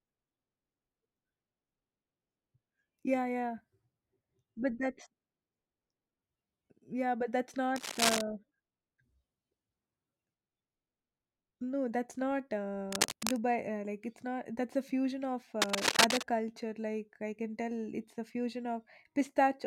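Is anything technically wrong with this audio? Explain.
Yes, there is cable scratch noise in three places in this speech: 7.76–8.21 s after "yeah but that's", 12.92–13.38 s after "that's not", and 15.61–16.26 s after "a fusion of". Each is a dense, ragged burst of scratching, about as loud as the speech and a little louder in the last one. The likely cause is a worn cable or connector being moved, so its contact resistance fluctuates rapidly.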